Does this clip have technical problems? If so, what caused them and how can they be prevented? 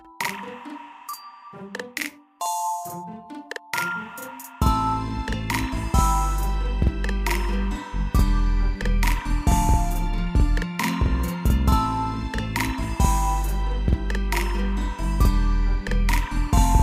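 Yes. Throughout the clip every sound is doubled by an equally loud copy about 46 ms behind it, heard as a slap echo. This is channel delay (doubling): one channel runs late, which fits a 2048-sample buffer offset, and the two are summed to mono. Keeping both channels on the same buffer path, or checking alignment before folding down to mono, prevents it.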